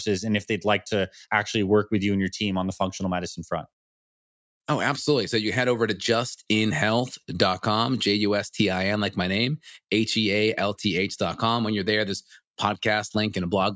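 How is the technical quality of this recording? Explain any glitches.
No technical glitches can be heard anywhere in this recording.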